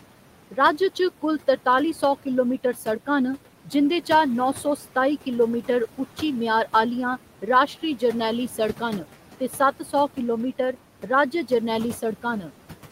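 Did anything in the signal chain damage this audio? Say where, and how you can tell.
Yes, at the call-processing stage, where a noise suppressor is active for the whole clip. The room noise, about 17 dB below the speech, is pulled down by about 12 dB in the gaps and swells back under each phrase, so the background pumps in step with the talking. This comes from per-band gain changing frame by frame.

Speech cut by the noise suppressor occurs once, from 9.8 to 9.92 s. For about a tenth of a second the suppressor treated part of the speech as noise and pulled it down with the background, by about 8 dB at the deepest point. That portion sounds swallowed and faint compared with the speech around it. Low-level speech energy fell below the suppressor's noise estimate, so its bands were attenuated.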